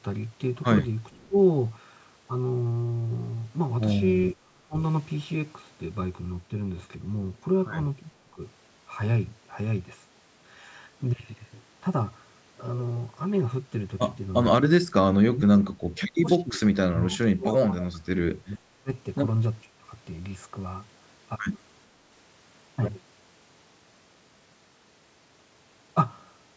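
From 1.11 to 1.25 s there is an echo leak: a faint, delayed copy of the speech, trailing the original by about 453 ms and sitting roughly 35 dB below it. The likely cause is a loudspeaker-side echo canceller that let part of its microphone pickup return down the line. On a spectrogram it shows as a weak, smeared repeat of the earlier harmonic pattern, shifted right by almost half a second.

Speech suppressed in double talk follows in six places. Each is a gap or sudden duck in level, most likely from an echo canceller that could not tell the local talker from loudspeaker echo while both sides spoke and so attenuated everything. The events fall at 1.26 to 1.36 s (down by about 20 dB), 4.34 to 4.77 s (about 30 dB), 8.31 to 8.40 s (about 10 dB), 15.25 to 16.61 s (about 35 dB), 16.79 to 18.91 s (about 30 dB, the longest), and 19.63 to 19.88 s (about 25 dB). In the waveform these appear as abrupt notches or hollowed stretches of envelope. 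On a spectrogram they show as vertical bands where the energy fades or breaks into fragments.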